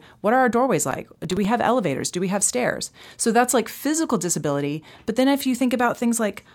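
From 0.83 to 1.45 s there's a burst of processor overload crackle riding on the speech, a gritty tearing that clears once that stretch is over. What's happening is the processor falling behind and missing a run of buffer deadlines. Each miss replays a scrap of old audio with hard edges instead of fresh signal. The spacing suggests buffers of around 5 ms, with something like ten of them missed across the burst.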